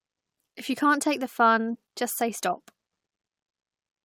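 At 1.74 to 1.76 s the speech is broken by a short glitch from damaged data in a compressed stream: corrupted bytes leave the decoder misreading frames and resynchronising. On a spectrogram it shows as a brief disruption; the waveform has an abrupt discontinuity.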